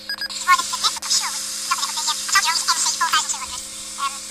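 The audio was read two samples at a time throughout, each pair taken as one frame, so it plays at double speed and a full octave (12 semitones) higher.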